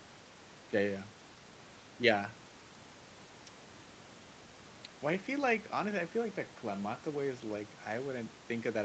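No technical faults can be heard in this speech. The audio stops at about 8 kHz, which fits a call path that passes only wideband sound, and the microphone processing's high-pass filter takes away only the lowest bass.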